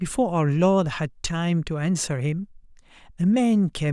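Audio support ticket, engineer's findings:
Nothing stood out on listening; no symptom to log against any component in the speech audio.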